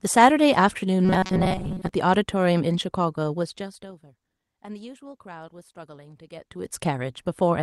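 From 1.05 to 1.89 s the speech turns into a rigid, metallic buzz at 188 Hz, the robotic sound from repeated short buffers. The likely cause is audio arriving too seldom, so most of this stretch is filled by repeating one short block, which fits a buffer of about 5.3 ms.

From 3.44 to 4.04 s the level drops by about 20 dB in 2 dB steps, about twenty per second, with no smoothing. Each step clicks, giving audible zipper noise. The same ticking recurs from 6.36 to 6.78 s as the level rises back by about 20 dB.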